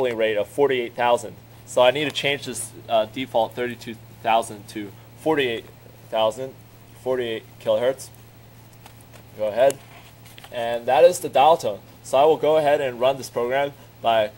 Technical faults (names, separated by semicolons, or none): none